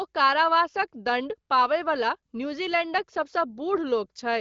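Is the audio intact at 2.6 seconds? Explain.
Yes, at 2.6 seconds the speech is intact, with no fault at that moment beyond the band limit of the AMR wideband (HD Voice) codec it passes through, which leaves nothing above about 7.5 kHz.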